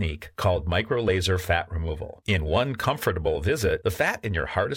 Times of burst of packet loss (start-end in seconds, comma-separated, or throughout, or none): none